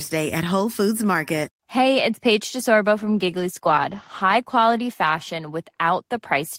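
From 2.98 s to 5.93 s, a call bitrate drop coarsens the speech coding and dulls the highs, consistent with a fall from 32 to 13 kbps, bottoming out for about 1.1 s.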